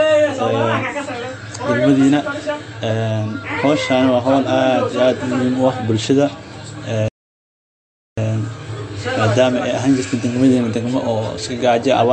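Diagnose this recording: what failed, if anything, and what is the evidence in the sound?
Likely MP3 compression at a low bitrate, fitting about 48 kbps: everything above 9.4 kHz is gone, and the speech sounds plainly watery and swirly throughout.

A playback stall, with the player probably starved of data or blocked, silences the speech from 7.08 to 8.18 s, about 1.1 s, before the sound continues.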